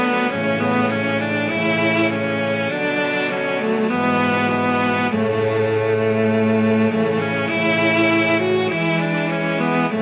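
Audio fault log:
No faults to log here; the audio simply comes through a normal call path, and the narrow G.711 A-law band with nothing above 4 kHz is just what that codec does.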